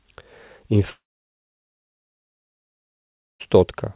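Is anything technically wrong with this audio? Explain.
Yes. From 0.9 s the speech trails off into a short, fading buzz, then falls silent for about 2.4 s before resuming at 3.41 s with that stretch missing. This is likely a long network dropout: no packets arrived, so the receiver briefly extended the last sound and then gave up.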